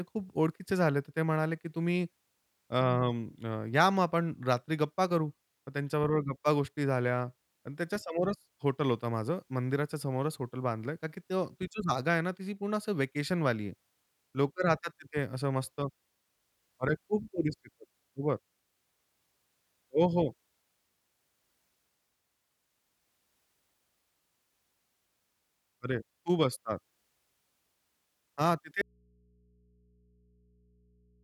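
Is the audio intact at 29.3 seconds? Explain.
No. From 28.82 s to the end, the speech abruptly drops to a faint hum roughly 35 dB down: an audio dropout to a faint residue, likely from lost signal with the input left live.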